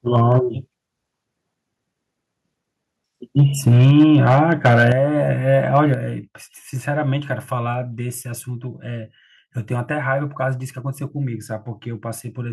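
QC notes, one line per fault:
0.15–0.38 s, microphone overload: short harsh crackle on the peaks, about 2 dB over, with a small share of samples flattened, likely from input gain set too hot.
3.38–4.92 s, microphone overload: the longest and roughest stretch, peaks about 6 dB over the converter's ceiling with tops sheared off, likely from excessive mic input level.
3.91 s, microphone volume stepped down: everything drops about 2 dB in one jump mid-distortion, likely the call software trimming the device gain after spotting clipping.
4.92 s, microphone volume stepped down: a bigger drop of about 7 dB right as that distorted run ends, likely an automatic gain cut reacting to the overload.
5.75–5.78 s, microphone overload: a brief crunchy spike, about 2 dB over with a few percent of samples clipped, likely still too much mic gain.
5.94 s, microphone volume stepped down: level and background both fall about 5 dB at once, likely the software lowering the input again after that peak.
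7.74 s, microphone volume stepped down: one more small step of about 2 dB, likely another automatic gain reduction.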